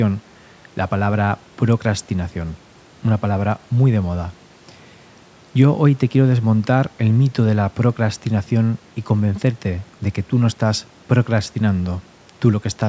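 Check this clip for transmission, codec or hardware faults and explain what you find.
The speech comes through a call's usual microphone processing, which leaves nothing above 8 kHz and trims the lowest bass, and the signal shows no transmission, codec or hardware faults.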